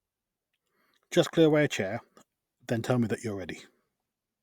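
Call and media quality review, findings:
No findings: the call and media quality review turned up nothing to report in this speech clip.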